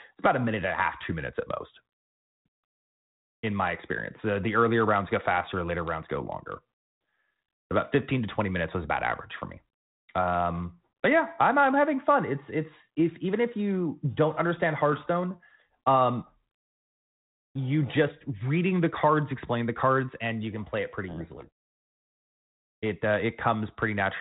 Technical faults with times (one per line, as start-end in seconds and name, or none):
21.08-21.49 codec payload misread